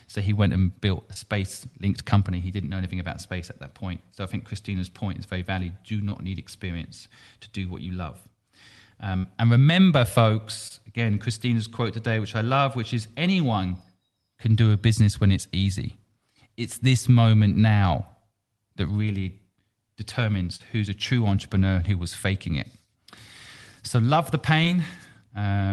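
At 1.13 s, short concealed packet loss: about 20 ms of audio arrived too late, and the receiver extended the preceding sound before blending back, leaving a brief smear. The same fault recurs at 6.10 s, just before "need experience to do", and at 10.68 s. At 9.17 to 9.26 s, a burst of packet loss removes about 60 ms. The decoder keeps the last sound going while fading it, so a short buzz or hiss replaces the missing stretch and the speech jumps ahead. Further short concealed packet loss follows at 20.56 s, a longer 40 ms gap just before "who's a true entrepreneur", and at 24.64 s, right after "love the", each heard as a quick smear or wobble. Throughout, the call codec adds its coding noise and the top end stops near 12 kHz.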